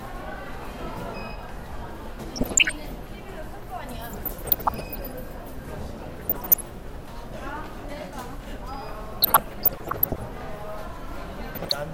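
Everyday sound carrying DAB burbling at 2.36–2.72, 4.13–5.13, 6.20–6.61, 9.22–10.20 and 11.55–11.74 s: weak-reception bit errors corrupt MP2 sub-band data, giving short blips of noise in single sub-bands. A spectrogram shows flickering rectangular band-limited blocks.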